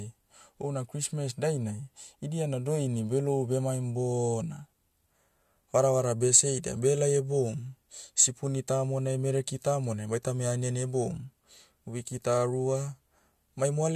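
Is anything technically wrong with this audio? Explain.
No, nothing in this speech recording is technically wrong.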